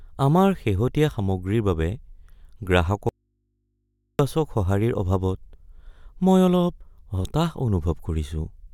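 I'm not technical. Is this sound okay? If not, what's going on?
No, there's an audio dropout to a faint residue from 3.09 to 4.19 s. The speech suddenly cuts out for about a second, leaving only a quiet, steady hum, then snaps back. That's likely a brief break in the signal while the input stayed open and picked up mains hum.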